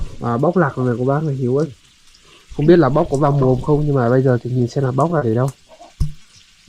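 From 4.58 to 5.69 s there is repeated packet loss, giving a robotic sound. Seven gaps, the longest 30 ms, cost about 90 ms of audio in total. The receiver bridged each one by extending the preceding sound, leaving choppy stretches where pieces go missing.

At 6.22 s a short concealed packet loss removes about 20 ms. The decoder fills the hole by continuing the last sound, then blends back into the real signal. The result is a brief smear or wobble near the end of the clip.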